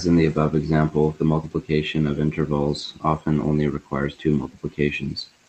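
No technical faults can be heard in the speech at any point in time.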